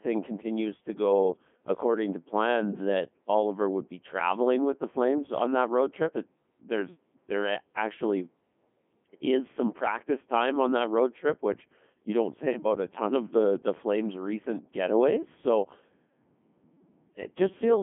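From start to finish, the speech passes through a Codec 2 vocoder at 3.2 kbit/s. Only pitch, voicing, energy and a rough spectral envelope survive. The decoder rebuilds the voice from sine waves. It sounds robotic and buzzy. Nothing remains above 3.5 kHz.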